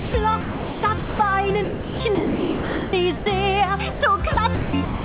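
Audio carried over a narrowband call path, with nothing above 4 kHz. At 0.00–0.14 s and 3.92–4.01 s the sound gives way to steady noise, likely sound dropped by the voice detector, with comfort noise filling each gap. Across 0.41–1.19 s, 1.64–3.26 s and 4.34–5.05 s the sound turns choppy, likely sound chopped by the voice detector switching transmission on and off repeatedly.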